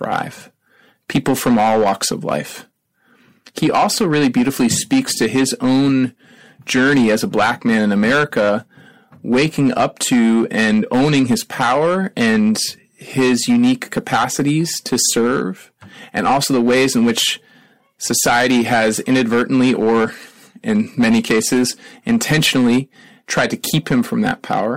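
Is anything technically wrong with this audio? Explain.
Yes, there's hard clipping throughout the whole speech clip. The level is pushed about 12 dB past what the chain can pass, so peaks get sliced flat, around 7 percent of samples. Those squared tops spray high harmonics, giving a harsh fuzz on every louder syllable.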